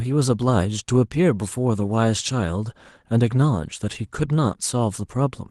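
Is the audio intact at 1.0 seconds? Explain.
Yes, the speech at 1.0 seconds is intact, with no fault at that moment.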